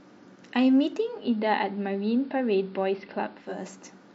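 At 0.94 s the speech fades over about 0.31 s into a duller AM sound, level down about 1 dB, faint hiss, returning at 3.66 s. This is digital radio blending to analogue: gradual cross-fades and added hiss, not an abrupt cut.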